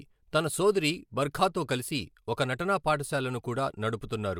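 No technical faults detected.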